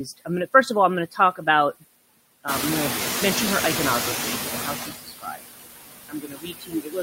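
A speech clip with noise suppressor artifacts throughout. The suppressor pulls steady noise down by about 19 dB, so the noise sinks between the words and rises under them. At about 2.5 s the room noise jumps by about 16 dB, ending only about 5 dB below the speech. From 2.47 s to 4.88 s the noise suppressor is catching up. Its noise estimate lags, so the louder noise first gets only about 11 dB of reduction, then sinks over roughly 2.4 s. Speech is cut by the noise suppressor twice, from 4.5 s to 5.49 s and from 6.09 s to the end. It mistakes parts of the voice for noise, dropping them by up to about 21 and 22 dB. In the first stretch, roughly half a second of the speech sounds swallowed or faint.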